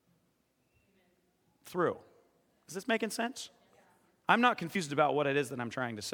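A brief smeared blip at 4.74 s, right after "I'm not", where the speech lurches forward and roughly 50 ms of audio never plays. This is compressed frames skipped: a couple of whole frames were missing or rejected as damaged by the decoder, so playback jumped ahead. The gap matches two frames of about 26 ms each, which fits that frame length. Because adjacent frames overlap, the join blurs instead of clicking.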